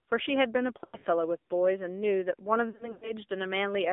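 Speech throughout, and it sounds boxed-in and buzzy, with a thin, synthetic edge and nothing below about 250 Hz or above 3.6 kHz. That narrow band and the reedy, vocoded texture are the AMR narrowband mobile codec. The AMR-NB codec samples at 8 kHz and rebuilds the voice from a vocal-tract model excited by sparse pulses, and the plainly audible damage fits a low-rate mode around 7.4 kbps. Twice the voice breaks into a smeared, stuttering warble that sags and thins before recovering rough: from 0.84 to 1.07 s and again from 2.70 to 3.12 s. These are lost AMR speech frames. Each burst is scattered over about 0.2 s and 0.3 s respectively, with the longest gap lasting 100 ms. In those gaps the decoder keeps replaying the last good pitch and spectral settings at falling gain, which stretches and fades the sound until good frames arrive.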